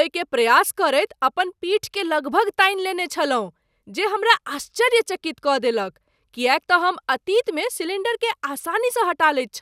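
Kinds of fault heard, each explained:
Nothing stood out on listening to this speech recording.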